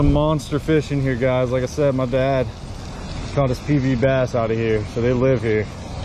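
At 2.90 s the adaptive stream drops to a lower bitrate with no gap: everything above about 13.1 kHz vanishes and codec artefacts thicken, which fits a step from roughly 96 to 32 kbit/s AAC.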